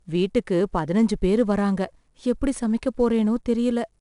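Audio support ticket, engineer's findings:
Gritty hiss riding on the speech the whole way through, loudest on loud syllables, plus crunch on sharp onsets. 4-bit ADPCM compression, plainly audible. Each sample is only a coarse 4-bit step from a prediction, so the error rides the level, and the step size lags on fast attacks. Nothing above 10.6 kHz, which fits roughly a 22 kHz sample rate and about 89 kbps.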